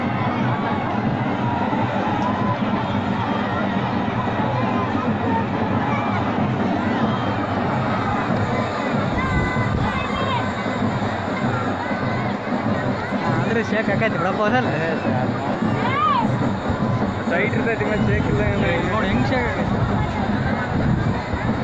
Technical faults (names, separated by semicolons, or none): none